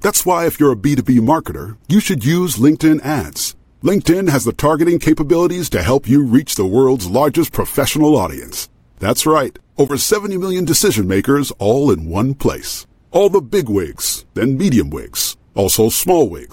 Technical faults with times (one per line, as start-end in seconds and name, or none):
9.88-9.95 Bluetooth dropout